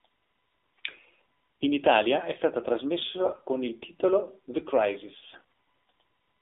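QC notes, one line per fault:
Throughout: AMR narrowband mobile codec at 7.4 kbps, which leaves a 300 Hz to 3.6 kHz band. The pulse-driven vocal-tract model makes the speech plainly buzzy and synthetic.
3.24–3.42 s: AMR bit errors just before "con il titolo", at roughly 7% bit errors. Corrupted pulse positions and gain values turn the voice hoarse and gargly while pitch holds.
5.34–5.41 s: AMR bit errors, at about 10%. The flipped low-protection bits misplace the excitation pulses, giving a brief scratchy, gargled roughness at a similar level.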